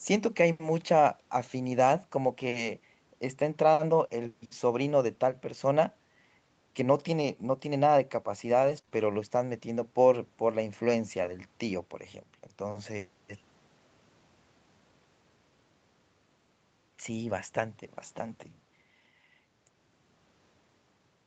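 From 8.61 to 8.79 s, the speech turns briefly rough and grainy. This is a lost packet rebuilt from error correction. Several packets failed to arrive, but each following packet carried a low-bitrate backup copy, and the Opus decoder played those instead. About 100 ms of the speech was rebuilt this way, so nothing drops out. The patched frames just sound coarser and noisier than the audio around them.

Right after that come three short concealed packet losses, at 8.81 to 8.85 s, 8.85 to 8.89 s and 8.89 to 8.93 s. Each covers about 20 ms of audio that never reached the decoder in time, and this time no backup copy existed. The receiver guessed at the missing audio by extending the last sound, then blended back into the real signal. Back to back, they are heard as a short smeared wobble that stretches the roughness a little further. The Opus call path here is wideband, with nothing above 8 kHz.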